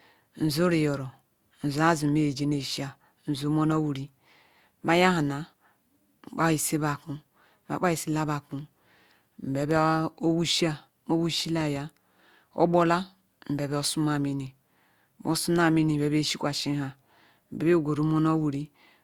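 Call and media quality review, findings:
Loud pop, twice, at 9.71 to 9.78 s and 11.61 to 11.79 s. Each one is a double pop, a quick pair of sharp thumps peaking a few dB over the speech, which keeps running underneath. Likely a voltage step from a loose plug, switch contact, static discharge or driver glitch, with the downstream circuitry shaping it into the pulse you hear. Worth checking cabling and connectors first.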